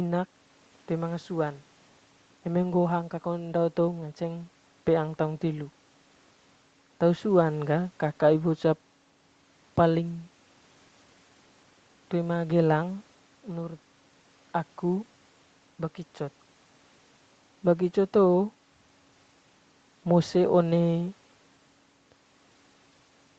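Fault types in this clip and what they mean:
Nothing here counts as a fault; the speech sits within the usual 8 kHz ceiling of a call line, which is just what the call path normally does.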